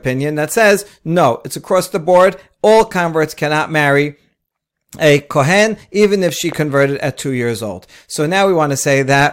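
Between 6.29 and 6.54 s, after "a kohen even" and before "at two years old", a loud pop sounds as two sharp thumps in quick succession, a few decibels above the speech, which carries on underneath. A sudden voltage step, likely from a plug, switch or static, caused it.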